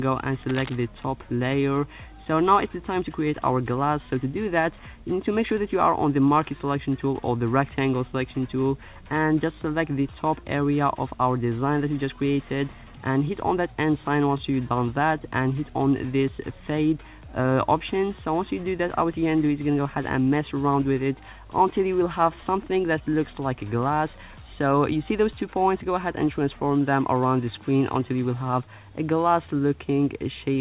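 The audio carries cable scratch noise from 0.48 to 0.76 s. Dense, uneven scratching sits over the sound, at roughly 10 dB below it. A worn cable or connector being moved is the likely cause. Nothing reaches above 4 kHz, which fits a narrowband call codec such as G.711.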